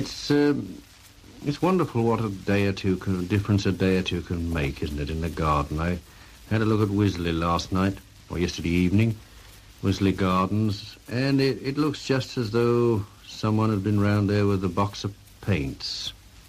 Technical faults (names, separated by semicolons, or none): DAB burbling